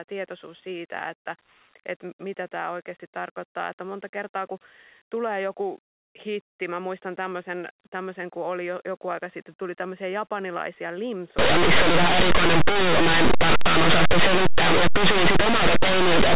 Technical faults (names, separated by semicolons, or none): linear audio read as companded